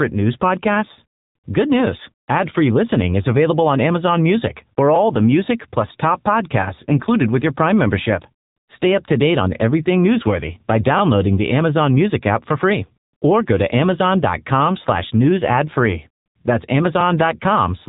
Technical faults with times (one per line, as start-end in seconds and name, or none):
0.00-17.89 AMR narrowband mobile codec